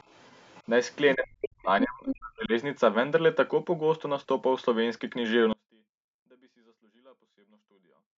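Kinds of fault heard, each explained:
Other side's voice leaking through: A second voice sits under the speech from 0.00 to 0.63 s and in short scraps at 0.91 to 0.96 s, 1.42 to 1.47 s and 2.06 to 2.15 s. The likely cause is loudspeaker sound reaching the microphone and slipping past the echo canceller. The first two are faint, roughly 30 to 35 dB down, but the later scraps come up to within about 10 and 5 dB of the speech. Unlike a dropout, this adds a separate voice rather than removing the wanted one.
Speech suppressed in double talk: Between 1.15 and 2.52 s, the main speech dips and breaks up for around a second in total, sinking by as much as roughly 40 dB at its deepest. This is likely the echo canceller turning everything down while both ends talk at once, since the leaked far-end scraps at 1.42 and 2.06 s fall inside this stretch. That overlap with the other voice and the choppy loss set it apart from a plain dropout.
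Audio dropout to a faint residue: At 5.53 s the speech cuts out abruptly and never returns before the clip ends. Only a faint sound, roughly 35 dB below the normal level, is left. The switch is instant rather than a gradual fade, and the remaining signal shows the path stayed live. That points to the wanted signal likely being lost upstream, not to a natural pause or to the processing that trims the audio above 8 kHz.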